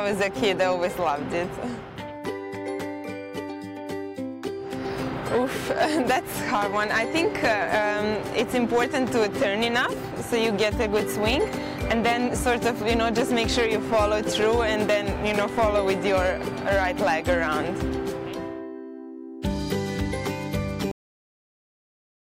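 At 20.91 s there is a cut-off end. The final buffers were never written, so the sound stops mid-event and drops straight to silence without any decay.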